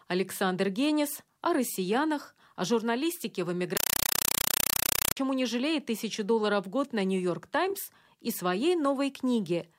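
Right after "россиянах о журналистике в", from 3.77 to 5.17 s, the speech turns into loud chattering static. That's a compressed stream played as audio: an undecoded AC-3 bitstream treated as samples, giving 5.33 ms noise bursts 31.25 times a second until "не жалеет тысячу долларов".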